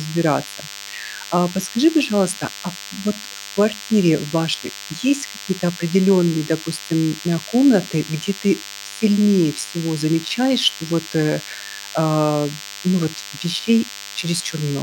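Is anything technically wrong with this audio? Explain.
Yes. DECT cordless phone buzz runs throughout the speech. A nearby DECT handset or base transmits a radio burst every 10 ms, which the audio circuitry rectifies into a steady, thin 100 Hz buzz rich in harmonics, sitting roughly 15 dB below the speech.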